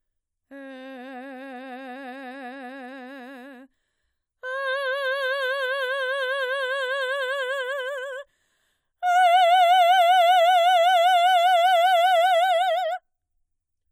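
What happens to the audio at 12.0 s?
At 12.0 s the music plays through intact, with no dropout, click, distortion or other fault at that point.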